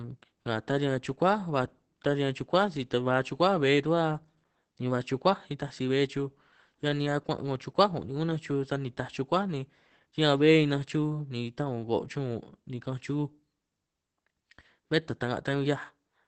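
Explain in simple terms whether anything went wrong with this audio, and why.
The speech went through heavy Opus voice compression for the whole clip. To save space, the coder kept only sound below about 8.5 kHz and described the voice roughly, so from start to finish it sounds dull, a little hoarse and slightly robotic.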